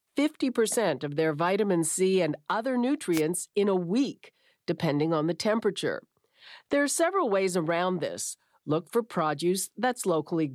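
The clip is speech, and it has one wireless microphone noise hit, from 3.12 to 3.22 s, between "and other" and "in a week depending". For about a tenth of a second a short burst of static cuts across the signal. This is what an analogue FM radio link does when its signal fades as reflected paths cancel the direct one: the receiver's own noise comes up through the weakened carrier until reception recovers.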